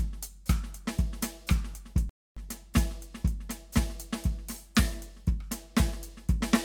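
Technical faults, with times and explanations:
2.09 to 2.37 s, rebuffering stall: the music drops to silence for about 272 ms, then picks up exactly where it stopped. The player ran out of downloaded audio and waited for more. No music is lost, but the pause adds time.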